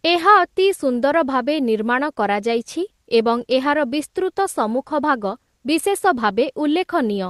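The speech carries no audible technical faults; it has come through a WebRTC call path, where Opus coding leaves its ordinary coding noise and a top end that stops at around 12 kHz.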